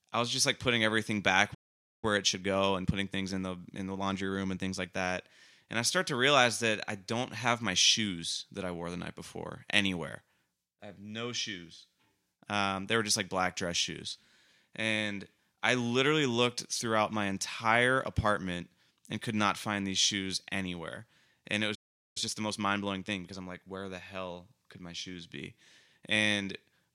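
A speech recording with two playback stalls. The sound cuts to silence from 1.54 to 2.04 s, about half a second, and again from 21.75 to 22.17 s, about 0.4 s. The player likely ran short of data or its thread was blocked. Each stall is followed by time-compressed catch-up. From 2.04 to 5.04 s the speech runs 1.15 times fast. From 22.17 to 23.79 s it runs 1.25 times fast. Pitch stays normal, but the player drops and cross-fades small slices to clear its backlog, so delivery sounds hurried.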